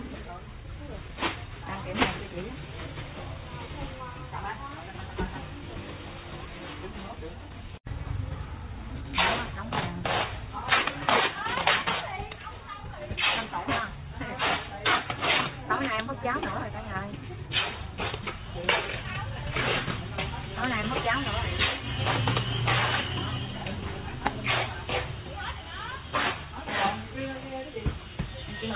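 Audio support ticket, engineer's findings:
No faults found on listening through the recording. Nothing in the signal points to a problem in any component along the path.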